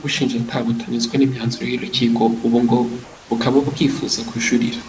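Comfort noise in place of the background runs from 3.04 to 3.30 s, just after "n’imyanzuro y’urukiko ubu ngo". For those 260 ms the room's natural background, sitting about 25 dB below the loudest speech, gives way to a smooth, featureless hiss about 1 dB quieter. The likely cause is discontinuous transmission: the sender's voice detector judged the pause silent and stopped sending audio, so the receiver generated shaped noise to fill the gap. The whole clip stops at 8 kHz, which fits a G.722 call codec.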